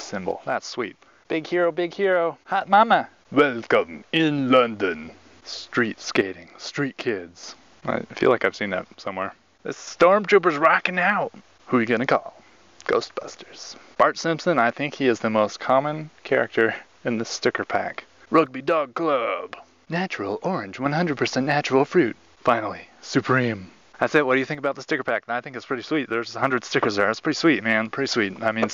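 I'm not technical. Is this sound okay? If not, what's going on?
No. The sound suddenly drops quieter at 0.3–2.6, 6.2–7.4, 8.9–9.9, 18.5–20.9 and 24.5–26.4 seconds, most likely one channel dropping out, where one side of the stereo briefly cuts off.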